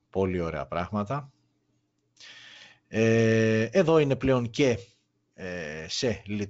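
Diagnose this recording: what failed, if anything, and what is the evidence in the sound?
Nothing failed; this recording shows no faults.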